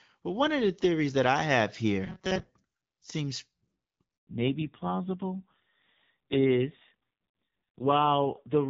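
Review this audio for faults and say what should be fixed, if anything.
Robotic sound from repeated short buffers occurs at 2.04 to 2.49 s, right after "theories that I have". Most of this stretch is a rigid, metallic buzz at 188 Hz, which fits a buffer of about 5.3 ms being replayed while the real audio is skipped. The likely cause is audio arriving too seldom. Unlike codec roughness, the buzz stays at one fixed pitch instead of following the voice. A larger, adaptive jitter buffer would prevent it.

A handover gap runs from 4.17 to 4.27 s. The sound dies away quickly, then there is 100 ms of silence while the call moves between networks, and the audio from that moment is lost. Unlike an ordinary dropout, it marks the exact point where the sound quality changes. Seamless make-before-break handover would prevent it.

Fallback to narrowband starts at 4.27 s and lasts to the end. Nothing remains above 4 kHz, and the sound becomes duller and raspier, which points to a low narrowband rate around 5.9 kbit/s. 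Before the switch, the AMR wideband (HD Voice) codec at 12.65 kbit/s is clear, with only light coding damage. Plain low-pass filtering would dull the sound without adding rasp. Keeping HD Voice enabled on the target network would prevent it.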